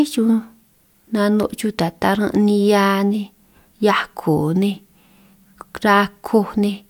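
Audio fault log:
No faults heard in this speech.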